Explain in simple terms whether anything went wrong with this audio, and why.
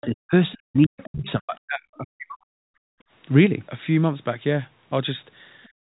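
Other side's voice leaking through, at 0.01 to 0.06 s, 0.85 to 1.06 s and 5.63 to 5.68 s: a second, quieter voice slips in under the speech. It is faint in the first two spots and barely there at 5.63 s. The likely cause is that the talker's device played the far end on a loudspeaker, and its echo canceller didn't scrub all of that sound out of the microphone.

Speech suppressed in double talk, from 0.07 to 0.34 s and from 0.55 to 2.64 s: the talker's speech sinks sharply or breaks into pieces, down to near silence at its worst. About a fifth of a second is hit in the first stretch and about one and a half seconds in the second. The likely reason is that both sides spoke at once, and the echo canceller, unable to tell the talker from the echo, turned everything down.

Background gated by the echo canceller, at 2.92 to 3.05 s and again from 5.69 s to the end of the clip: the room sound behind the speech suddenly drops away almost completely. 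The first gap lasts only a brief moment, and the second lasts about a fifth of a second. This happens because the canceller clamped the microphone hard while the loudspeaker was playing, cutting the background along with the echo.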